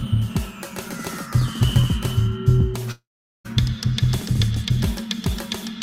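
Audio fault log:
2.91 to 3.47 s, long network dropout: The music stops and its last sound carries on as a fading buzz. About 0.43 s of silence follows. Playback resumes with roughly 0.54 s lost, likely because incoming audio stalled and the receiver filled the gap.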